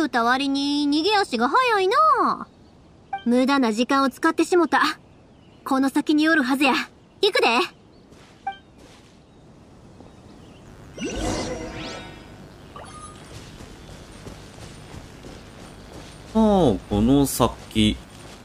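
From 10.66 s to the end, a mains buzz sits under the sound: sharp switching spikes at twice the 50 Hz mains rate, spreading harmonics into the kilohertz range. It sounds like a steady, raspy buzz, roughly 30 dB below the signal.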